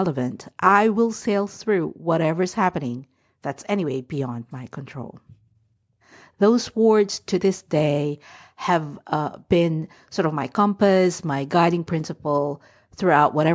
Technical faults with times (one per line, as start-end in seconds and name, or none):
none